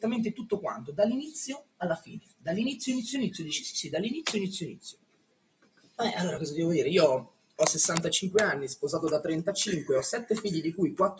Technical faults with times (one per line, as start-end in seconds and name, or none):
0.00-11.20 noise suppressor applied to music or sounds
1.59-2.47 sound cut by the noise suppressor
4.73-5.99 sound cut by the noise suppressor
6.37-8.08 DC step
7.25-7.59 sound cut by the noise suppressor
9.99-11.20 DC step